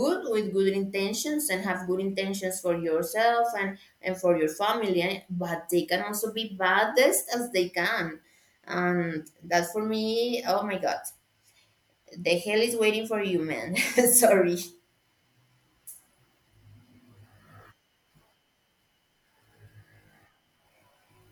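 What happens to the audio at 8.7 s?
Nothing goes wrong at 8.7 s; the speech there is intact, with no dropout, click, distortion or other fault.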